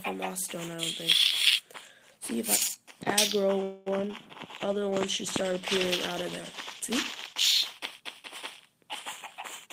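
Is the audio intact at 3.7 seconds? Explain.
No. A call audio freeze runs from 3.63 to 3.88 s. The last sound is stretched into a fading buzz or hiss for about a quarter second, likely because delayed packets left the jitter buffer empty. The audio then resumes where it stopped, nothing lost but 228 ms late.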